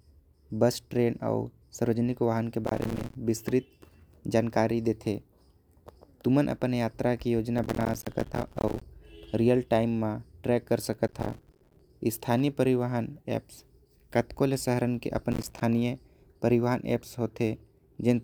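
Speech with processor overload crackle at 2.65–3.15, 7.58–8.82, 11.04–11.81 and 15.32–15.61 s. Missed buffers of around 5 ms drop out as silent gaps, heard as gritty tearing.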